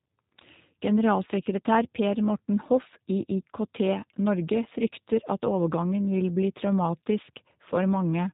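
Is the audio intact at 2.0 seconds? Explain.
No. The whole clip, 2.0 seconds included, passes through a G.729 codec that rebuilds speech from a vocal tract model and sparse pulses at what sounds like 8 kbit/s, leaving nothing above 3.8 kHz and a plainly rough, synthetic quality.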